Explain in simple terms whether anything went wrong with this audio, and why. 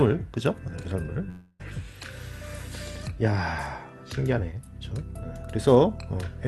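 Yes, one thing went wrong. From about 1.29 to 1.61 s there's a short stretch where the real sound stops and you hear a smeared buzz or hiss that fades. That's most likely a long network dropout: about 0.3 s of audio never arrived, so the receiver kept stretching the last bit it had to cover the hole. When the sound picks back up, that missing piece is simply gone. The call codec keeps everything above roughly 12 kHz trimmed off throughout.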